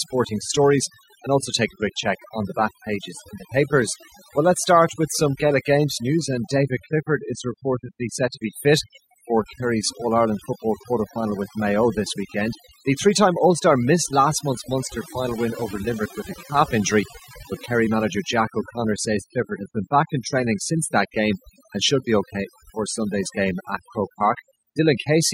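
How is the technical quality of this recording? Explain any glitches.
The gaps between phrases fall to near silence dotted with twinkling specks. Throughout the recording this points to overdone noise removal: a noise reduction stage set far too aggressively. Whenever a frequency band sits close to its noise estimate, it is pulled down hard or switched off entirely. The quieter parts of the voice get treated as noise and removed along with the background noise, leaving isolated residual blips in the background.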